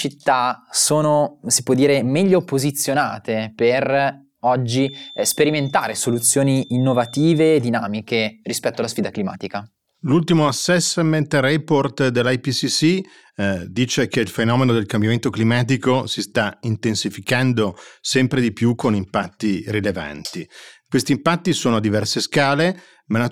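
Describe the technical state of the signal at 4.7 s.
At 4.7 s a loudspeaker's output is likely leaking back into the microphone with the loop gain sitting right at the edge of feedback. One frequency keeps circulating without building into a runaway howl. From 4.66 s to 7.65 s this feedback whistle is a thin, steady 3.6 kHz tone behind the speech, well below it at around 25 dB down, swelling and fading slowly in level until it stops at 7.65 s.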